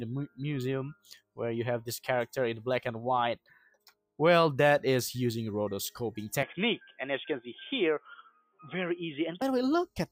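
Throughout, a noise suppressor built for speech is applied to this sound. It treats sustained material as noise, so the level pumps by roughly 5 dB, with held parts and tails sinking while attacks survive. A waveform shows an uneven, breathing envelope.

Sound cut by the noise suppressor appears at 0.94–1.39 s, 3.36–4.19 s and 8.28–8.62 s, dropping by about 21, 21 and 17 dB. Sustained content briefly sinks, then returns. A spectrogram shows dark, broadband gaps, and the waveform collapses there.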